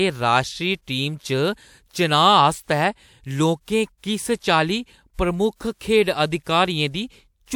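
A speech recording with pre-echo in two spots, around 3.98 to 4.03 s and 5.55 to 5.60 s. Each sharp onset gets a short hiss smeared about 56 to 58 ms ahead of it, because the codec spread its block's quantisation noise into the quiet lead-in.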